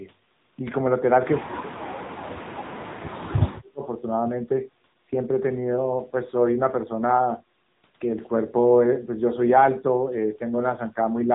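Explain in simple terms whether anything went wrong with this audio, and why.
AMR narrowband mobile codec damage runs through the whole clip, from start to finish. The speech has been squeezed through the kind of coding used for older mobile phone calls, which keeps only the lower part of the sound: nothing above about 3.8 kHz survives, so the voice sounds muffled and boxed-in. The codec rebuilds the voice from a simplified model sent in short slices, and the tight data budget here leaves it plainly buzzy and synthetic.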